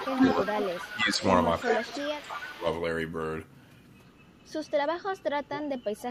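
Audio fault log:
0.00–2.61 s, echo leak: A far-end echo canceller likely let its loudspeaker pickup through. A copy of the speech returns 346 ms late, about 10 dB below the direct sound, as a trailing double.
0.00–2.66 s, speech suppressed in double talk: With both sides talking, the canceller likely mistook the talker for echo and ducked it. The speech dips by about 15 dB, for roughly a second and a half in all.
4.92–6.10 s, speech suppressed in double talk: Overlapping talk again likely triggers the canceller's suppression. The speech drops by about 10 dB in brief patches that add up to a few tenths of a second.
5.07–6.02 s, echo leak: Residual loudspeaker pickup likely slips past the canceller once more. A fainter copy trails the speech by 346 ms, about 15 dB down.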